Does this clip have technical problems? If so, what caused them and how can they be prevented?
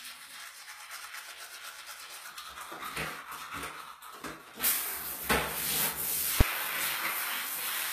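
Yes. Throughout the clip there is nothing above about 14.9 kHz, and the smeared, watery texture of a heavily squeezed encode sits under the whole sound, even though the file itself is a high-rate MP3. This likely points to low-bitrate audio saved at a high bitrate: an earlier low-rate encode discarded the top band and detail, and re-encoding generously cannot restore them. A plain low-pass filter would cut the top cleanly without this swirly residue. To prevent it, always encode from the original uncompressed source rather than from an existing lossy file.

At 6.41 s there is a single sharp bang, much louder than anything around it. This is invalid numbers at full scale: a processing step produced infinite or invalid values, and they were pinned to maximum level for one short block, which fits a 256-sample block of about 5.8 ms. Because the block is so short, the loud pop at its start and the one at its end merge into one bang. 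An ordinary click from a dropout or edit would be far quieter and would not hit the output's full level. To prevent it, guard the processing against division by zero and unstable filter states, and replace any invalid values with silence before output.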